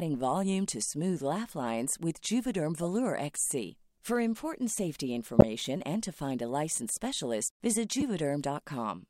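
A speech recording with three short faults from a corrupt frame decoded. Damaged compressed frames were played instead of being concealed. Misread data put energy at wrong frequencies, giving brief glitches. The first, 2.83 to 2.85 s, is faint. The second, 5.39 to 5.44 s, between "important safety" and "and to find a", is loud. The third, 8.00 to 8.02 s, after "a licensed specialist visit", is moderate. Each lasts only a few frames.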